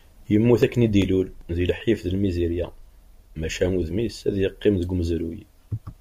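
From 0.63 to 2.20 s, nine CD scratch ticks recur about six times a second, each a few milliseconds long. A scratch defeats error correction once per revolution, forcing interpolation or muting; a waveform shows brief evenly spaced notches, a spectrogram thin vertical lines.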